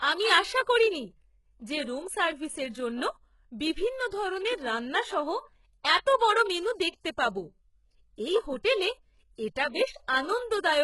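Throughout the speech, s sounds turn gritty and lispy, likely HE-AAC compression, its rebuilt treble showing on a spectrogram as copied, blurred bands stopping at 11.5 kHz.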